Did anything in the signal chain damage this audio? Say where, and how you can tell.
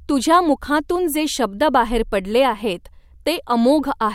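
No, no signal-chain damage.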